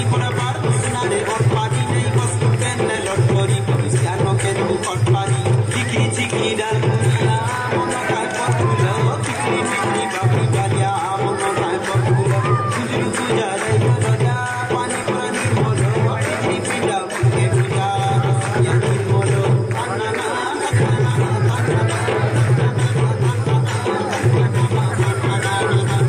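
Nothing in the audio stands out as a fault at any point.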